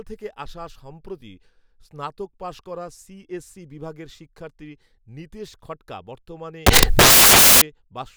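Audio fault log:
6.66–7.62 s, samples built from the wrong bytes: after "শিক্ষার্থী নিতেশ খঠকা বর্তমানে" the speech collapses into loud, harsh broadband noise for about 0.95 s. The sample bytes are combined in the wrong order or alignment, so the rapidly varying low bits land in the most significant position.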